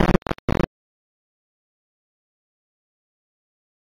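The clip is music, and it carries imaging from linear upsampling for its whole length. The top of the band is dull, which points to an 8 kHz source raised to 44.1 kHz. The rate was raised by joining samples with straight lines. That acts as a weak filter. Mirror copies of the spectrum survive between 4 and 8 kHz, roughly 30 dB below the music. They add a faint metallic shimmer to bright, high material.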